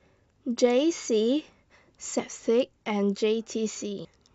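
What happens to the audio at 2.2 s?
At 2.19 s, compressed frames are skipped: roughly a tenth of a second of audio vanishes, consistent with about three 32 ms frames. This leaves an abrupt jump ahead in the audio and a visible discontinuity in waveform and spectrogram.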